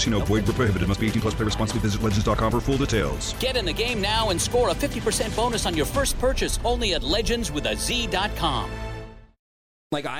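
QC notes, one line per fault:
Nothing stood out on listening.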